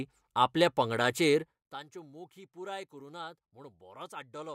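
A speech clip in which the level is lowered in unsmoothed steps of 1 dB, around a hundred per second, for a fall of roughly 20 dB. That produces zipper noise from 1.42 to 1.79 s, a fine ticking riding on the speech between "आपल्या पंगडाचेर" and "मोखी पुराय करु नात".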